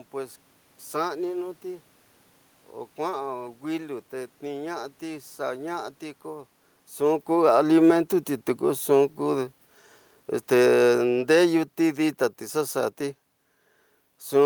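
Automatic gain falling affects this speech recording: from 6.99 s to 13.02 s the gain control treats the input as too loud or its background noise as too strong and steadily pulls its gain down by about 9 dB, so the voice and the room noise sink together, unlike the talker's own shift in distance around 7 s.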